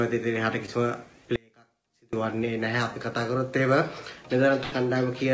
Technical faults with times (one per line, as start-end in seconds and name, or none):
0.66-0.69 short concealed packet loss
1.36-2.13 audio dropout to a faint residue
4.63-4.74 burst of packet loss